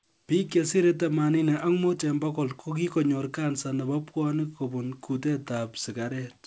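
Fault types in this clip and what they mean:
No faults are present in this speech clip.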